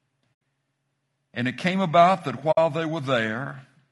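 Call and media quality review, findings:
Rough, grainy speech the whole way through, with noise filling in between the harmonics and a thin, synthetic-sounding top end. Likely low-delay AAC compression, AAC-ELD style: short frames smear pitch detail, and the damage is plainly audible, which fits a bitrate around 32 kbps.

AAC frame loss with muting, two soft-edged dropouts: 0.33 to 0.41 s (80 ms) and 2.51 to 2.58 s (60 ms), right after "it came about that". Decoder zeroed the missing frames and the overlapping windows faded out and back in. Fits four and three lost frames.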